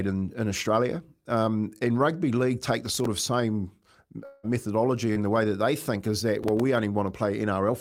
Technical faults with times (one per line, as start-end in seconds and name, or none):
2.86-3.06 processor overload crackle
4.25-4.45 long network dropout
5.13-5.18 short concealed packet loss
6.43-6.60 processor overload crackle